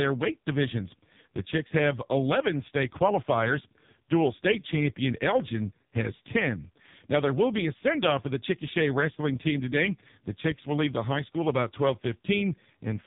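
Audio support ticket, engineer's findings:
Buzzy, synthetic speech throughout the clip, with heavy codec damage. Nothing above 3.8 kHz. Cause: AMR narrowband mobile codec (AMR-NB) with 8 kHz sampling. Vocal-tract model excited by sparse pulses per 5 ms. Damage depth fits the lowest bitrate modes, around 5 kbps.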